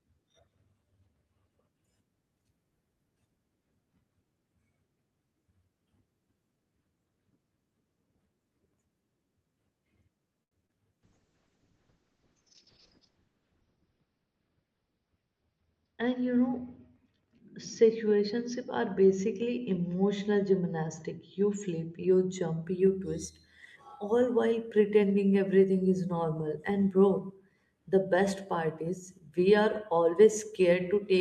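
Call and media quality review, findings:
Short stall from a late packet, 10.43–10.63 s. The speech holds one sound about 80 ms too long, with a slight buzz or dip. Jitter buffer ran dry; receiver stretched the last frame until the packet arrived. Spectrogram: smeared, frozen harmonics. Waveform: repeated periods. Delay rises about 80 ms.

Short concealed packet loss, 10.67–10.71 s. Brief smear or wobble. About 20 ms never reached the decoder in time, and concealment extrapolated the preceding sound. Spectrogram: blurred patch, then a crossfade back to real detail. Waveform: a slightly flattened, too-regular stretch.

Call bitrate drop, 11.04–22.70 s. Rough, watery, muffled speech. Bandwidth estimate fell, so the Opus encoder went from 48 to 6 kbps, lowest for about 2 s. Spectrogram: content above 6 kHz is gone instead of reaching 20 kHz, with blocky, grainy texture below.

Jitter buffer speed-up, 13.76–14.50 s. 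Speech hurried, pitch unchanged. Buffer over target; receiver cut pitch-period chunks repeatedly, about a tenth of a second in total, running at 111%. Spectrogram: compressed syllable spacing. Waveform: tiny splices and shortened segments.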